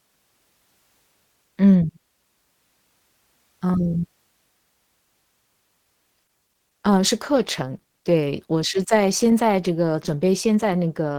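At 6.23 s the speech switches abruptly, with no gap, to an adaptive stream at a lower bitrate, which fits a drop from about 64 to 16 kbit/s Opus. From there to the end, codec artefacts rise. The waveform continues unbroken.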